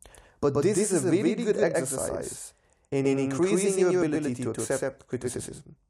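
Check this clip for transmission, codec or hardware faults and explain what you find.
One fault runs through the whole speech clip: a doubled audio track. A full-band second copy trails the original by about a tenth of a second at roughly equal level, most likely from a second, slower capture path. Unlike room echo or reverb, it repeats once only, with no decay tail or room colouring.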